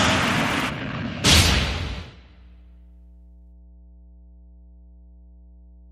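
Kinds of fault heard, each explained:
Mains hum, throughout: power-line current leaking into the signal path, likely through a ground loop or a nearby transformer, leaves a steady low tone at 60 Hz with some low harmonics, sitting about 25 dB below the sound for the entire clip.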